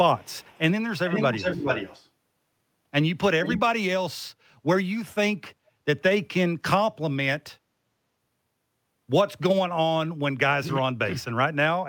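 From 0.17 to 0.6 s a very faint delayed copy of the speech trails it by 290 ms. From 0.97 to 2.09 s, and again briefly at 3.44 to 3.6 s, a much stronger copy follows 415 ms behind, nearly as loud as the speech. This is echo leak, likely from a far-end loudspeaker whose echo canceller let its microphone pickup return. A spectrogram shows harmonic patterns repeated at that fixed lag, and the waveform shows offset doubled bursts.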